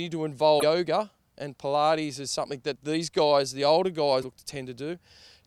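At 0.59 to 0.63 s and again at 4.21 to 4.24 s, just after "these guys the older", the speech briefly skips ahead, likely a broken MP3 bit reservoir: after dropped frames, roughly 24 ms each, the next frame decoded borrowed bytes from the wrong data.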